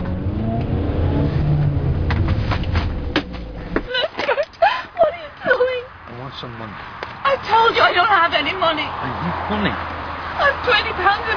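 No technical faults can be heard anywhere in the audio.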